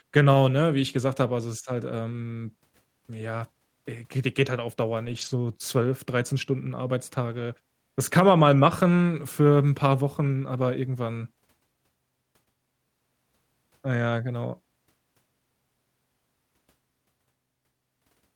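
Speech with three short stretches of lost packet rebuilt from error correction: at 0.33 s, from 5.05 to 5.31 s, and from 7.31 to 7.41 s. These sound continuous but briefly rougher and noisier. On a spectrogram they appear as smeared, grainier patches with no silent gap. The sound points to the decoder playing low-bitrate backup copies carried in following packets.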